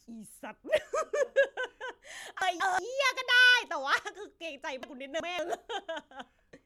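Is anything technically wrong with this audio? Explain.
Yes. There are chunks out of order at 2.42–2.79 s and again at 4.83–5.39 s. In both places one block of audio, about 186 ms long, was delivered or written late. At 2.42 s it lands one chunk behind where it belongs, and at 4.83 s it lands two chunks behind. No audio is lost, but the speech plays back in the wrong sequence. Each spot sounds like a brief jumbled moment, with three hard joins where mismatched chunks meet.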